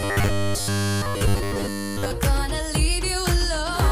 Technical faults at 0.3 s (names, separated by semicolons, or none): robotic sound from repeated short buffers